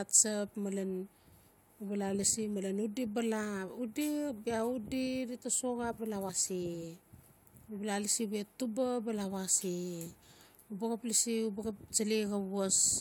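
At 6.28 s, compressed frames were skipped: whole frames of the encoded speech never reached the output, either lost from the file or rejected by the decoder as damaged. The audio jumps ahead by roughly 40 ms.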